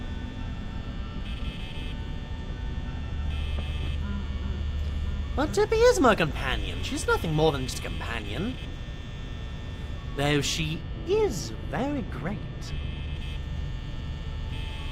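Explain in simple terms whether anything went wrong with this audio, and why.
From 10.81 to 13.16 seconds the sound turns dull and muffled, as if heard through a blanket, with the crisp top end noticeably dimmed before the brightness returns. This is de-emphasis applied wrongly. De-emphasis is a treble cut meant to undo a matching treble boost made earlier. Here it was applied to audio that either never had that boost or had already been corrected, so the high frequencies were turned down when they shouldn't have been.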